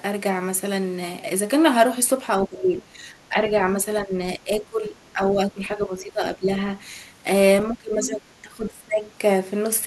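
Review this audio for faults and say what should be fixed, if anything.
The speech dips in level in five places: 2.43–3.63 s, 4.02–4.17 s, 4.37–4.97 s, 5.13–6.72 s and 7.68–9.04 s. Stretches within each span fall away and then recover. The drops run from about 10 dB in the shortest event to about 20 dB in the last. This is speech suppressed in double talk, likely from an echo canceller that could not tell the local talker from loudspeaker echo while both sides were speaking, and so turned the whole signal down.

Inside the first dip, at 2.77–2.82 s, a brief scrap of a second voice comes through at about 25 dB below the speech. It is the other side's voice leaking through, likely because the far-end audio played on the device's loudspeaker was picked up by the microphone and the echo canceller left a residue of it.

Both problems should be fixed with a better-tuned echo canceller, with stronger double-talk detection and residual echo suppression, or by having the talker use a headset so the far-end audio never reaches the microphone.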